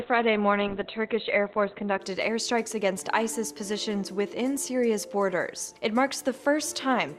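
An adaptive stream starting at a low bitrate affects the first 2.0 s: nothing above 4.2 kHz, with heavier codec smearing, which fits a very low-bitrate rendition. At 2.0 s the player switches to a better version, and the treble and clarity return abruptly without any gap.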